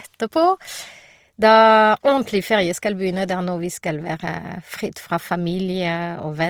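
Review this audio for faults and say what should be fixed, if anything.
The speech sounds rough and grainy across the whole clip, with a noisy fill in the upper bands even though the top end reaches about 20.3 kHz. That's likely Opus compression in its music mode, at a rate that fits roughly 24 kbps, where bands run short of bits and get patched with folded or noise content. Encode at a higher bitrate, or switch Opus to its voice setting for speech.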